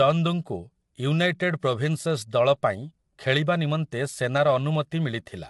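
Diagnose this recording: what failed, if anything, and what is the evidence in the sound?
Low-delay AAC compression runs throughout the speech, at the codec stage. The voice is plainly rough and grainy, with noise filling the gaps between pitch harmonics, and nothing is present above 11.6 kHz. The likely cause is AAC-ELD coding at a rate that fits roughly 32 kbps: its short frames resolve harmonics poorly and spend extra bits, so at this rate quantisation noise spreads between partials and the top band is cut off.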